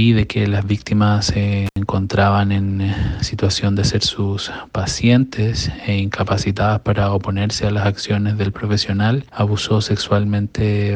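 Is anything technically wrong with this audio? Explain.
Yes, there's one intermittent contact fault, from 1.66 to 1.78 s. A loose plug or cable lead briefly lost connection, so the sound drops out for about 75 ms, with crackle as the contact breaks and remakes and faint hiss left during the gap.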